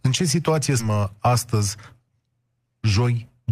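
Skip ahead at 0.79 to 0.81 s, right after "ce situație": roughly 0.4 s of speech never reaches the listener. Later audio was already queued, so the stretch was lost in transit or discarded when the jitter buffer overflowed. Playback lurches forward with no filler and no audible gap. The speech on either side is butted together almost directly, so the phrase jumps abruptly and part of it simply vanishes.

Jitter buffer speed-up follows twice, at 0.89 to 1.13 s and again at 1.55 to 1.93 s. The buffer held more than its target. The receiver trimmed it back by cutting out many tiny slices, each one or a few pitch periods long. That removed around 40 ms each time. The first stretch runs at 112% speed and the second at 108%. Pitch stays the same, but the talker sounds briefly rushed.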